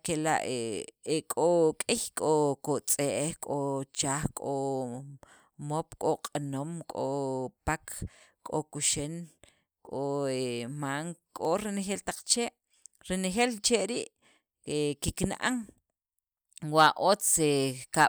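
No technical faults can be heard in the speech recording, and the signal stays intact and continuous from beginning to end.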